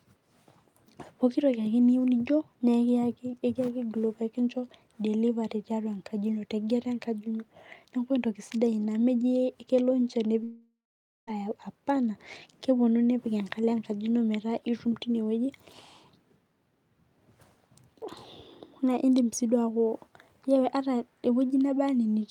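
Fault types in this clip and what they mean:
long network dropout: at 10.43 s the speech turns into a fading buzz or hiss, then about half a second of silence, resuming at 11.29 s with that stretch missing. Far longer than a brief concealed glitch, it likely reflects network delivery stopping entirely.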